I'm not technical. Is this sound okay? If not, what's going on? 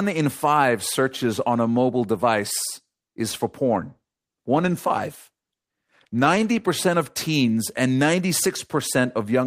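No. From about 3.67 to 6.75 seconds there is a call bitrate drop: the connection seemed to have less room, so the call's software squeezed the speech into far fewer bits and sent a cruder version of it. You can hear the voice go rougher and duller for those three seconds, losing some of its crispness and clarity, before it returns to its normal, clearer quality once the connection allows more detail again.

At 4.85 seconds, inside that rougher stretch, there is a block of digital silence. For about 5 milliseconds the sound was simply switched off: the audio was replaced by silence, most often because the program didn't hand over the next piece of audio in time. Because the sound drops out and comes back abruptly, with no fade, it lands as a brief tick or click rather than a pause you would notice as a gap.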